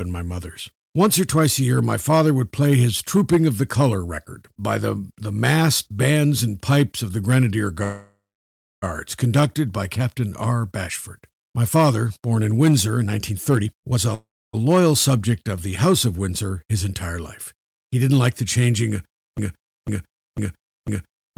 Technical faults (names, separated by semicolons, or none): call audio freeze; jitter buffer speed-up; broken-record loop